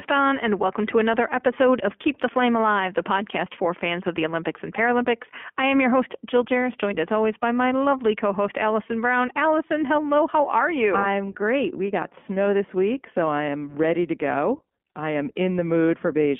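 Throughout, the speech carries plainly audible iLBC codec damage. The spectrogram shows a hard ceiling near 3.4 kHz, and it sounds rough and synthetic, which fits 20 ms frames at 15.2 kbps.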